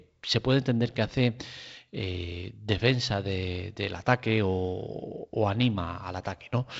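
No technical faults can be heard in this speech, which comes through a G.722 wideband telephone link with nothing above about 7.8 kHz.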